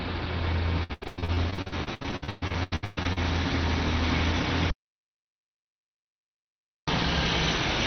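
From 0.83 to 3.18 s, repeated packet loss (robotic sound) leaves some two dozen gaps of up to 123 ms, about half the stretch concealed by extending prior sound, producing choppy audio with pieces missing. From 4.70 to 6.88 s, an audio dropout to silence cuts the sound to silence for about 2.2 s, likely from a lost input device or link. The call path applies a roughly 6 kHz Opus band limit.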